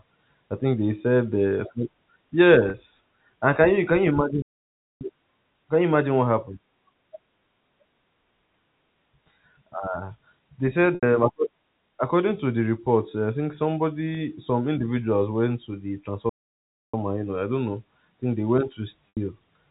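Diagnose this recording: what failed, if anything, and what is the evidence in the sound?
Packets were lost on the network, and the receiver hid each gap by repeating the last pitch period. The gaps fall at 2.70–2.74 s (40 ms), 10.95–11.03 s (80 ms), 14.15–14.17 s (20 ms) and 19.10–19.17 s (80 ms), all multiples of 20 ms, which fits 20 ms packets. Each gap is heard as a briefly held, buzzy tone, and the two 80 ms gaps fade further before the speech returns.

The playback stage twice stopped delivering audio, likely because the player's buffer ran dry or its thread was blocked. The output goes silent from 4.42 to 5.01 s (about 0.59 s) and from 16.29 to 16.94 s (about 0.64 s), and the speech then continues after each pause. Through these pauses the G.711 telephone band stays the same.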